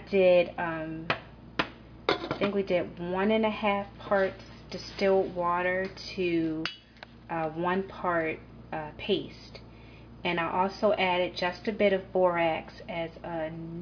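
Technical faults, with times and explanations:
No technical faults detected.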